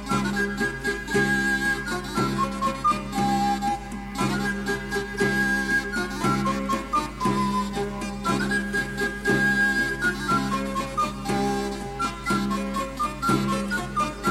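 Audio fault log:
Nothing to log; no audible faults anywhere in the clip.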